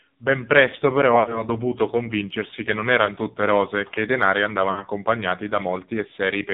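A speech recording carried through the AMR narrowband mobile codec: the band runs only from about 150 Hz to 3.7 kHz, and heavy coding damage leaves the voice buzzy and synthetic, which fits a low AMR-NB mode near 5.9 kbps. Lost AMR speech frames occur three times. At 1.20 to 1.43 s, after "presto però" and before "dovuto convincersi che non", the decoder stretches the last good pitch and vocal tract settings with falling gain, consistent with about three missing 20 ms frames. A single-frame dip follows at 3.06 to 3.12 s, before "tutte rose e che". At 4.72 to 4.84 s, after "e che i denari", a shorter drawn-out fade matches two lost frames.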